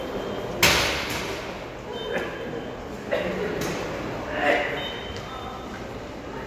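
Sound recording, nothing technically wrong found.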